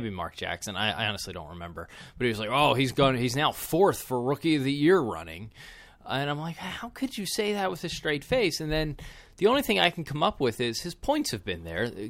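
A speech recording with no audible technical faults. Nothing in it calls for a technical explanation.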